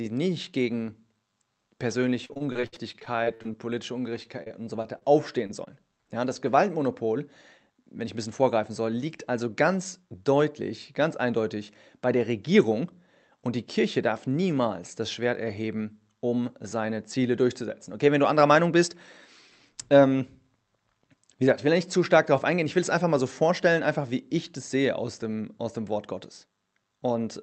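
From 2.25 to 3.55 s the speech turns choppy and robotic: repeated packet loss, with fourteen holes patched by stretching the preceding sound, the longest about 62 ms, covering roughly a quarter of that span. A milder burst follows at 4.23 to 5.03 s, five holes, the longest 28 ms. On a spectrogram the patches appear as smeared, overly regular harmonic bands, and the waveform shows repeated copied cycles.

Short concealed packet loss then occurs twice, at 5.47 to 5.51 s and 5.65 to 5.68 s, each covering about 20 ms of missing audio. Each is heard as a brief smear or wobble. On the waveform it appears as a short stretch continuing the preceding sound, blending back into the real signal.

A jitter buffer speed-up runs from 7.70 to 8.71 s at 106% speed, trimming roughly 70 ms by cutting out one or a few pitch periods at a time. It sounds hurried at an unchanged pitch. A second speed-up at 13.79 to 14.43 s runs at 105% and removes about 40 ms. 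A spectrogram shows slightly compressed syllable timing with intact harmonic spacing. All of this sits within the Opus call band, which stops at 8 kHz and is consistent with a bitrate around 32 kbps.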